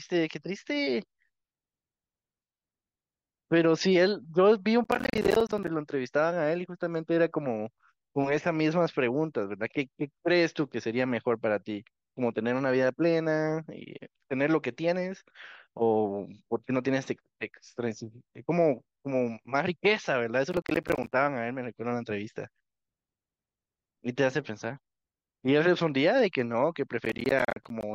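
Gritty, tearing crackle rides on the speech from 4.84 to 5.68 s, 20.51 to 21.13 s and 27.05 to 27.83 s. This is processor overload crackle: around thirty buffers of roughly 10 ms each missed their deadlines, each leaving a hard-edged silent gap.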